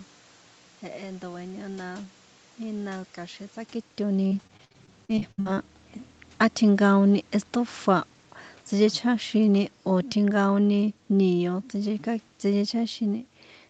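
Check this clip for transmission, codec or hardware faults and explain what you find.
Two faults are present in this speech clip.

Repeated packet loss (robotic sound) runs from 4.27 to 5.59 s, just after "ína kja̱xin tsákitoni". Packets kept going missing. Each hole was patched by stretching the last sound, about 30% of the span. The longest gap is 62 ms. The speech turns choppy, with pieces missing.

Automatic gain falling occurs from 9.38 to 12.76 s. The gain control judged the input too loud, or its background noise too strong for its starting gain. It pulled its gain down slowly, by about 4 dB. The speech and the room noise sink together across this stretch.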